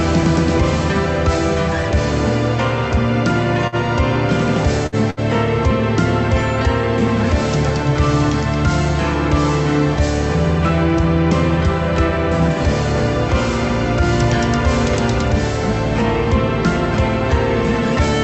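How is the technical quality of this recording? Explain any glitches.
There are three glitches in a short cluster around 3.7 to 5.2 s, on top of a call-codec sound with the top end cut off near 8 kHz, which fits Opus at around 32 kbps.

Short stall from a late packet, 3.67 to 3.76 s: a packet arrived late and the jitter buffer ran dry, so the receiver held the last sound for about 51 ms until it showed up. Nothing is lost, but the sound hangs briefly with a slight buzz or dip, and everything after runs 51 ms later.

Burst of packet loss, 4.87 to 4.95 s and 5.10 to 5.20 s: each time, about 60 ms of audio never made it in time. The receiver covered the holes (about 57 and 66 ms) by carrying the last sound forward and fading it down, giving a brief buzzy or hissy smear, then jumped ahead with that stretch gone.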